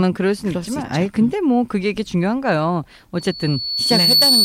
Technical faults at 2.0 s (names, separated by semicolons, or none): none